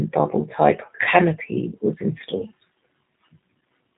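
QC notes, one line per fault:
Throughout: G.729 codec. The speech has the plainly audible roughness of a low-rate VoIP coder. The sound points to G.729A at about 8 kbit/s, where each 10 ms frame is rebuilt from a vocal tract filter, a pitch predictor and a few pulses, so the voice comes out slightly buzzy and synthetic. A spectrogram shows a hard ceiling with nothing above 3.8 kHz, and harmonics look smeared and blocky from frame to frame.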